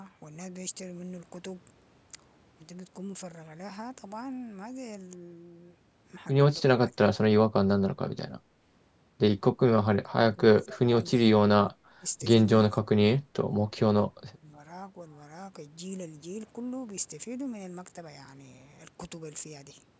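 Between 6.61 and 14.45 s the speech dips or breaks up in pieces at 6.61–7.19, 8.40–8.63, 9.55–9.61, 9.94–10.90, 11.24–12.05, 12.70–13.54 and 14.28–14.45 s, sinking by as much as about 25 dB in the worst spots and only slightly at 8.4 s. This is likely speech suppressed in double talk: the echo canceller mistook the talker for loudspeaker echo and turned it down. Unlike packet-loss dropouts, the level ducks in uneven, partial steps rather than clean silent gaps.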